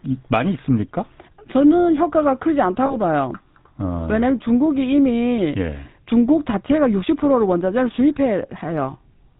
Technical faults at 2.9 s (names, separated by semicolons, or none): GSM full-rate codec; lost GSM frames